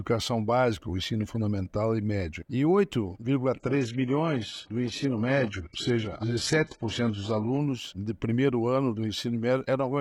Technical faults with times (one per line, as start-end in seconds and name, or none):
3.60-7.60 adaptive stream at a lower bitrate